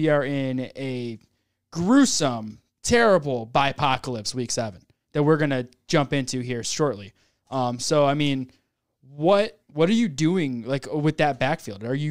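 A speech recording with nothing technically wrong to report. There is no event in it that needs a time, a cause or a fix.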